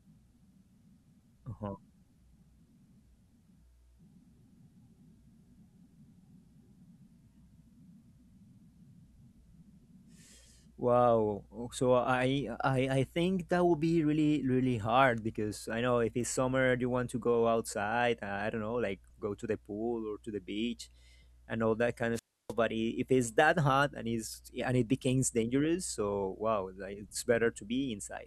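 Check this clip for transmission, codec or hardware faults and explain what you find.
One fault stands out, a wireless microphone squelch dropout from 22.14 to 22.53 s, right after "and all that kind". Hiss swells briefly, then the speech falls into a near-silent gap of about 307 ms before returning. The analogue FM radio link faded, so the receiver's squelch muted its output until the signal recovered.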